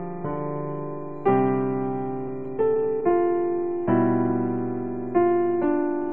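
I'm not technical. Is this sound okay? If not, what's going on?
No, there's a short patch of repeated stalls (stutter) from about 2.28 to 3.13 s. The audio hiccups seven times as the call's data arrived late and the receiver briefly stretched the last sound to fill each wait. Nothing is lost; it just drags and stumbles.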